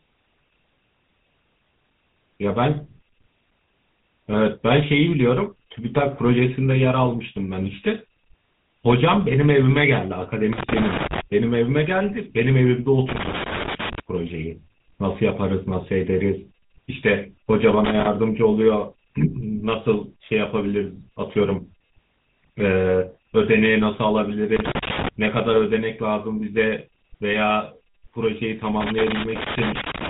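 GSM full-rate codec coding runs through the whole speech recording. The voice carries the gravelly, buzzy roughness of a vocal-tract model driven by sparse, regularly spaced pulses. The damage is plainly audible and fits the 13 kbps full-rate scheme, and nothing survives above 3.9 kHz. Loose connector crackle breaks in at 10.53–11.21 s, 13.09–14.00 s, 17.85–18.07 s and 24.56–25.09 s as irregular scratchy bursts, where a worn contact rapidly makes and breaks, chopping the signal.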